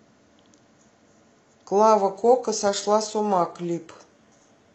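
At 2.0 s the speech switches abruptly to an adaptive stream at a lower bitrate: treble thins and turns synthetic, consistent with HE-AAC near 16 kbit/s, with no gap, unlike a rebuffer.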